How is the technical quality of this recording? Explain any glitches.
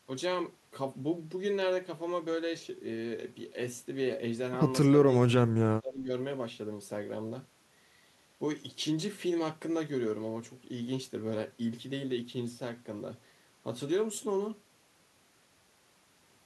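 The recording has one glitch. Between 4.9 and 6.11 s the speech repeatedly dips and breaks up, falling by around 30 dB at its deepest, with roughly 0.7 s of that stretch affected in pieces. This is most likely speech suppressed in double talk. When both ends spoke at once, the echo canceller couldn't separate this talker from its loudspeaker echo and pulled the level down. The choppy, partial ducking across a span sets it apart from a packet dropout, which gives short, clean gaps.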